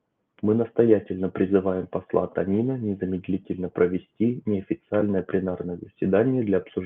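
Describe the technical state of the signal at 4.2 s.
At 4.2 s the speech is intact, with no dropout, glitch or other fault, only the ordinary band limit of a call path that carries nothing above about 8 kHz.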